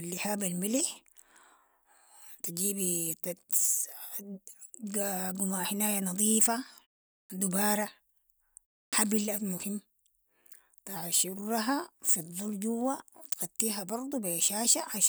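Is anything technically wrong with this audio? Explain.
Yes, there is a clipped start after a pause, at 7.25 s and again at 8.88 s. The output device goes idle during the silence before each point, about 0.47 s and 0.3 s long, and needs time to wake before it passes audio again. That delay removes roughly 49 ms and 47 ms from the start of the speech, so the words begin abruptly and lose their opening sounds. The muted pauses themselves cost no speech.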